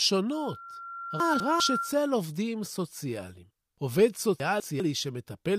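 From 0.32 s a loudspeaker feedback squeal takes hold: the mic is hearing its own speaker, and a 1.4 kHz tone swells over about a second and a half to roughly the speech level before dying at 2.04 s. Right in the middle of that, 1.2 to 1.6 s, and again at 4.4 to 4.8 s, you get chunks out of order. A 200 ms chunk lands one chunk late and swaps with its neighbour, so the speech jumbles briefly.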